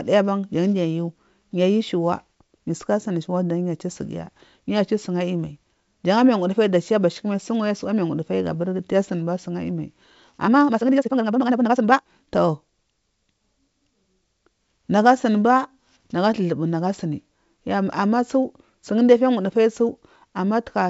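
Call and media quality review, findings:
Time-stretched section, 10.43–12.25 s: speech suddenly rushes at 1.9x pace, pitch unchanged. Likely a fit-to-length stretch step dropping short chunks to squeeze it. The G.722 path's top end near 7.7 kHz sounds as expected.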